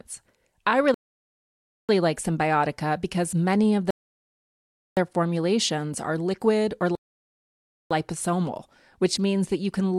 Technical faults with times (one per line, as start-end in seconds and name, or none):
0.94-1.89 rebuffering stall
3.91-4.97 rebuffering stall
6.95-7.91 rebuffering stall